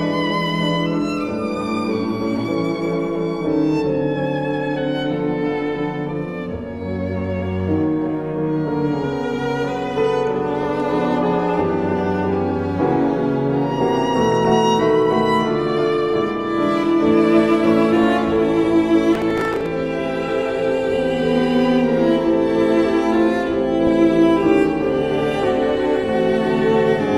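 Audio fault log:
14.39 to 14.52 s, 18.04 to 18.26 s and 23.87 to 23.91 s, DAB burbling: weak reception lets bit errors slip past error correction, so single sub-bands blip with noise or jump in level briefly.
19.15 to 19.66 s, processor overload crackle: the processor misses a string of deadlines, about fifteen, with buffers of roughly 5 ms, and replays old audio with hard edges, giving gritty crackle.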